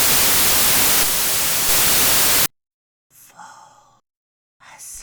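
The clip is a recording of sounds. From the start to 2.46 s it is buried under loud, harsh broadband noise. This is samples built from the wrong bytes. The reader assembles each sample from its bytes incorrectly. It may be off by one byte, or it may swap their order. The rapidly changing low bits end up as the large part of each value. After 2.46 s the sound comes through as recorded.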